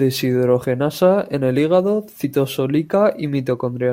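It's a short speech clip with one hiccup: at about 2.23 s the audio jumps ahead, losing around 50 ms of sound. That's compressed frames skipped. A chunk of whole coded frames never got played, either because they were missing from the file or the decoder rejected them as damaged. The speech just lurches forward slightly.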